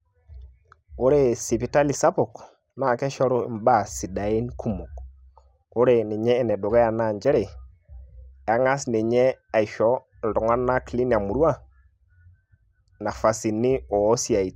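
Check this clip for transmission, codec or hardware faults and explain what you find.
One fault is present. At 6.50 s, just before "naa njere", there is DAB burbling. Bit errors from weak reception corrupt sub-band levels, giving a few brief watery blips that fit a low error rate.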